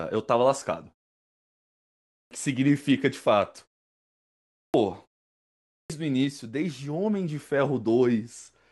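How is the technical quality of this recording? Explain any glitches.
The recording has one recurring fault that cuts the beginnings off phrases. Clipped start after a pause occurs at 2.04 to 2.31 s, 4.46 to 4.74 s and 5.62 to 5.90 s: after each silence, the output device sleeps and needs time to wake again. Roughly 270 to 280 ms is swallowed each time, so speech bursts in abruptly, missing its first sounds.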